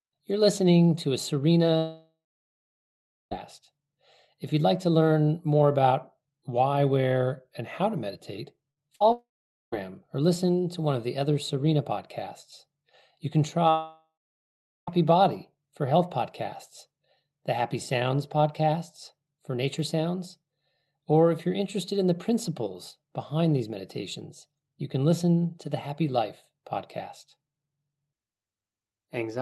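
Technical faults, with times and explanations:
1.77–3.33 s, long network dropout: Right after "listening to a", the last sound is stretched into a fading buzz or hiss for roughly 0.4 s, then about 1.15 s of silence follows. This is likely from the stream stalling. On a spectrogram, smeared energy fades into a blank band, and speech resumes having skipped about 1.5 s.
8.71–8.78 s, burst of packet loss: After "and how to meditate", about 60 ms of audio goes missing. The receiver holds and lowers the last sound, so it is heard as a brief held buzz or fading hiss. In the waveform the envelope flattens and decays, then the audio jumps ahead.
8.96–9.02 s, short concealed packet loss: About 40 ms never reached the decoder and was filled by continuing the preceding sound before blending back in. It is heard as a quick smear or wobble. On a spectrogram it appears as a thin patch of stretched, blurred energy.
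9.12–9.74 s, long network dropout: About 0.6 s is lost, likely through a brief stall of the stream. A short fading fill gives way to about 0.46 s of silence. This shows as a decaying tail into an empty gap in the waveform, after which the speech resumes further on.
13.70–14.89 s, long network dropout: About 1.2 s is gone, likely from packets not arriving. The last sound trails off as a fading buzz or hiss for roughly 0.4 s, then there is about 0.76 s of silence. On a spectrogram, smeared energy fades to blank before the speech returns having skipped ahead.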